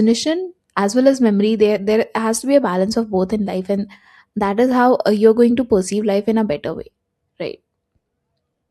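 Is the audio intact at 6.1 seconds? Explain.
Yes, the audio is intact at 6.1 seconds, with no dropout, click or distortion to be heard.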